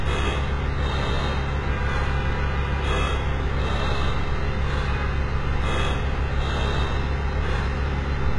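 An everyday sound recording with heavy HE-AAC compression damage throughout. Nothing sounds above 11.3 kHz. The treble sounds synthetic and gritty, which fits a very low bitrate around 12 kbps, likely from band replication.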